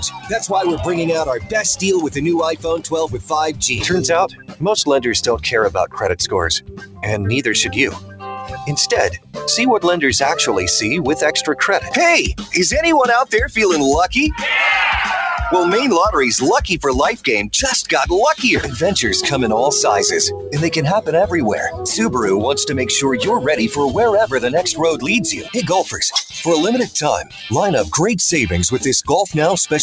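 A speech-oriented noise suppressor left running on non-speech audio treats steady tones and ambience as noise, so gain swings by around 10 dB throughout: attacks pass while sustained material and tails sink, giving a pumping, fluttering, thinned texture. The clearest cases of sound cut by the noise suppressor fall at 0.04–9.47 s (dips of up to about 16 dB across roughly four seconds), 11.8–12.53 s, 17.17–17.53 s, 20.36–21.85 s (about 12 dB), 24.34–25.57 s and 26.85–27.46 s (about 14 dB). In each span, held sound is pulled down or decays are truncated. The call path itself leaves nothing above 8 kHz, which fits a wideband G.722 codec at 64 kbps.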